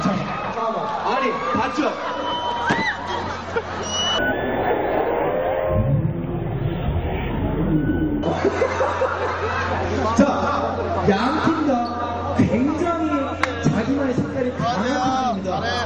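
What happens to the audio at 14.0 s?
Nothing goes wrong at 14.0 s; the audio plays through that point intact.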